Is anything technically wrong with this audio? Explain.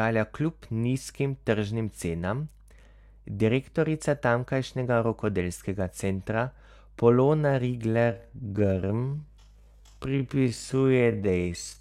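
Yes. From 7.86 s to the end at 11.81 s there is a time-stretched section: the speech abruptly slows to about 0.55 times its normal pace while pitch holds steady. This is likely software lengthening the passage by repeating short fragments, which makes it drag.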